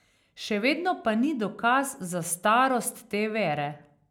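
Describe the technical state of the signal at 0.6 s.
At 0.6 s the speech signal is intact, with no audible dropout, clipping, glitch or other technical fault at that moment.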